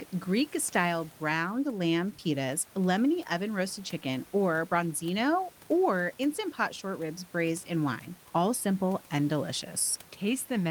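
Nothing in this speech goes wrong technically, and the only other thing you'll notice is a bit of ordinary room noise sitting about 28 dB below the speech.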